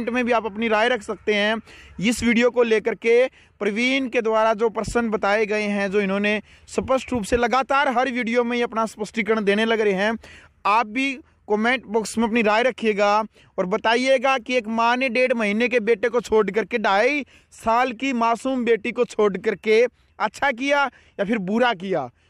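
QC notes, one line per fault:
Nothing stood out on listening.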